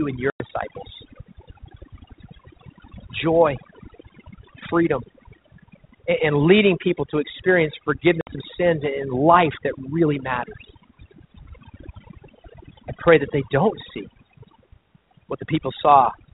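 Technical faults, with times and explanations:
Throughout: overdone noise removal. The noise reduction was set too strong. Bands near its noise estimate are pulled down or removed, along with quiet parts of the speech. The background drops and breaks up into twinkling specks.
0.30 to 0.42 s and 8.21 to 8.36 s: packet loss on an ADPCM call. The first hole is about 100 ms, and the second about 60 ms, between "leading people to experience" and "of sins and life". Lost audio became hard-edged silence. The decoder's predictor and step size then drift out of step, so speech returns slightly distorted before settling.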